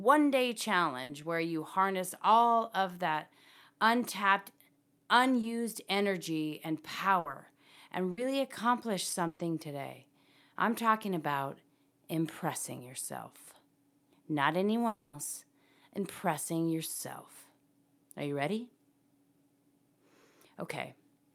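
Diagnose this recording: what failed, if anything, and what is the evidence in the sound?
Network stage: a burst of packet loss at 1.03, 7.19, 8.11 and 9.27 s. Speech is continued for 60 ms, or 120 ms at 9.27 s, then resumes with that stretch missing.

Network stage: a short concealed packet loss at 5.41–5.45 s. About 20 ms was rebuilt from the preceding speech and blended back, giving a brief smear.

Network stage: from 14.87 to 15.15 s the speech becomes a fading buzz or hiss, then near silence. A long network dropout is the likely cause, with about 260 ms lost.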